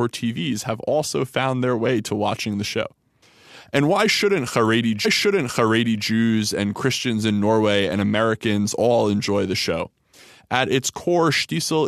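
At 5.04 s the speech jumps back and replays about a second. This is a stream segment repeated. The player delivered the same chunk twice. The repeat runs to 6.06 s, adding 1.02 s. A small blip marks the jump.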